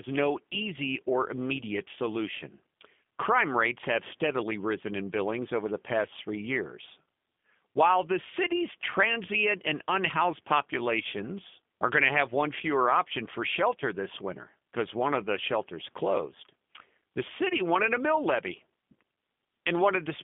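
Throughout, the speech sounds narrow, slightly rough and synthetic, with nothing above 3.6 kHz: plainly audible G.729 codec damage, rebuilt from a low-rate filter-and-pulse model at 8 kbit/s.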